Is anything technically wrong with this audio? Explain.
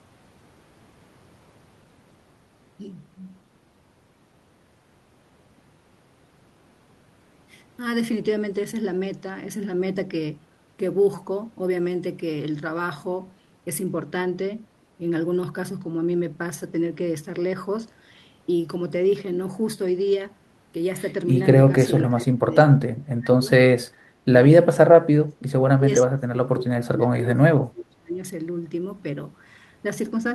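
Yes. The speech is suppressed in double talk. It drops out at 22.1–22.54, 22.7–22.78, 23.04–23.49, 24.25–24.32, 25.19–25.4 and 25.59–28.19 s. The level falls by roughly 20 to 30 dB, and the longest stretch loses about two seconds. The likely cause is an echo canceller that could not separate the talker from overlapping far-end echo and turned the talker down with it.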